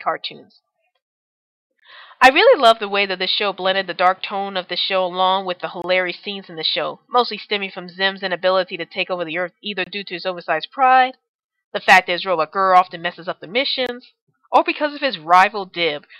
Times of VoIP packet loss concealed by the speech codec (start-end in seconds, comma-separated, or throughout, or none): none